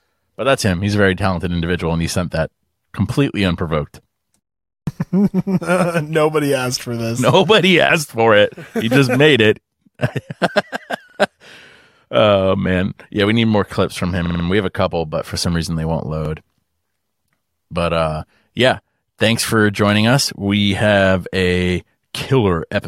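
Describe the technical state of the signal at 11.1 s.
At 11.1 s there's a repeated buffer, running from about 11.10 to 11.19 s. The playback device didn't get fresh audio in time, so it replayed the chunk it already had, twice over, giving you the same sliver three times in a row with a hard seam at each join. The chunk is about 46 ms, which fits a 2048-sample buffer, so it comes across as a quick stutter rather than a click. Essentially nothing is dropped from the speech.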